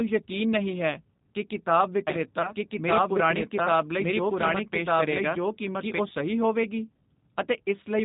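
Throughout, the speech has passed through the G.729 codec at 8 kbit/s, which rebuilds each frame from a filter, a pitch predictor and a few pulses. The damage is plainly audible: nothing above 4 kHz, and a rough, slightly synthetic edge on every syllable.

From 2.07 to 5.99 s a doubled audio track appears, most likely a second capture of the same signal arriving by a slower path. A copy about as loud as the original trails by roughly a second, dry and full-band, and cuts in and out abruptly.

From 2.42 to 2.54 s, VoIP packet loss concealed by the speech codec: 20 ms of audio went missing, which fits one lost packet, and the decoder extrapolated from its last pitch and filter. The sound smears out and fades, and stays weakened briefly after recovery.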